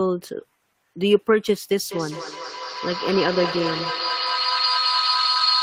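From 1.86 s to the end of the speech there is feedback howl: a microphone and loudspeaker sharing one room form a loop that adds level on every pass, so the sound swells into a tone around 4 kHz, peaking at about 1 dB below the speech. It pulses at roughly 200 ms, the loop's delay. Unlike echo, whose repeats fade, these repeats grow and narrow to a single pitch until the loop breaks.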